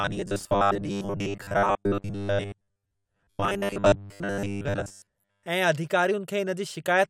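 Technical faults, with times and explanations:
0.01–5.46 s, robotic sound from repeated short buffers: a rigid 100 Hz metallic buzz, likely from chunks of about 10 ms repeated in place of most real audio.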